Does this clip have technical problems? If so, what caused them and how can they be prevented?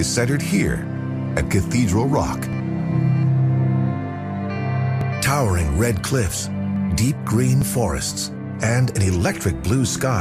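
Yes, there are jumps at 2.53, 5.01, 6.76 and 7.62 s where the sound skips ahead about 10 ms, likely a dropped buffer (overrun). Bigger buffers or higher audio-thread priority would prevent it.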